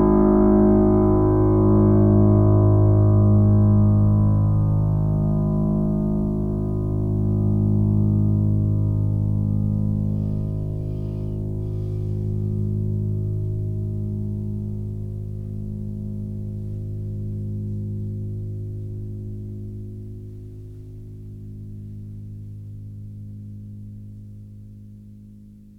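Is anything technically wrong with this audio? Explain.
No, nothing technically wrong stands out here; the music sounds the way it's meant to, with nothing breaking in or going astray along the way.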